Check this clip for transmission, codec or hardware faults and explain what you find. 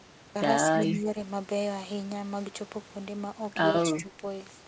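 The speech has two stretches of gain suppression and one brief echo, all heard through a band-limited call path with nothing above 8 kHz, which fits G.722 at 64 kbps.

Speech suppressed in double talk, 0.65–1.16 s and 3.83–4.23 s: the speech dips by about 5 dB, then by about 10 dB, likely because the echo canceller attenuated everything while both sides spoke.

Echo leak, 0.86–0.98 s: a faint copy of the speech follows about 194 ms late, about 20 dB below the speech, likely where the far-end canceller failed to remove loudspeaker pickup.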